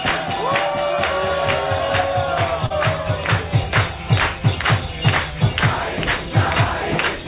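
At 2.66 s, lasting until about 2.72 s, there is a short concealed packet loss: about 40 ms of audio failed to arrive in time, and the receiver covered the gap by extending the preceding sound before easing back into the real signal. It comes across as a brief smear or wobble rather than a hard gap. Unlike a plain dropout, there is no silence or click, just a stretch that repeats instead of moving on. The call path's G.711 coding keeps everything below 4 kHz.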